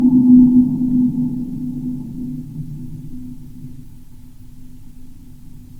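No technical faults can be heard anywhere in this audio.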